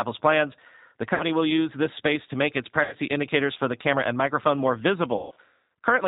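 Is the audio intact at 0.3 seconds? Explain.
No. At 0.3 s, as throughout the speech, the G.729 codec is at work: each 10 ms frame is rebuilt from a vocal tract filter, a pitch predictor and a few pulses, which fits an 8 kbit/s stream. Nothing above 4 kHz survives, so the speech sounds muffled, rough and plainly synthetic.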